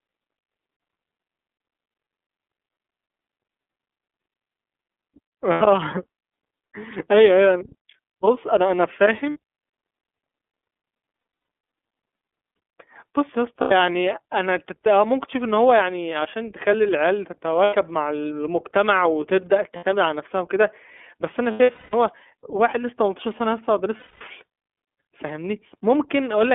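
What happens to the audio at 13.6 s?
Lost iLBC frames cause a brief dropout from 13.61 to 13.72 s, a gap of roughly 0.1 s, which fits about three missing 30 ms frames. The decoder filled the hole by repeating the last pitch cycle blended with noise, so the sound becomes a short, held, slightly buzzy vowel-like tone. Each iLBC frame decodes independently, so the speech recovers cleanly right after the gap with no lingering smear.

The iLBC codec shapes the whole passage around that point. The audio is confined to a band of 250 Hz to 3.5 kHz, with nothing above that ceiling. Codec damage is plainly audible as a rough, slightly synthetic texture, because each frame's excitation is coded coarsely without reference to the frame before. This character fits the 13.33 kbps mode with 30 ms frames.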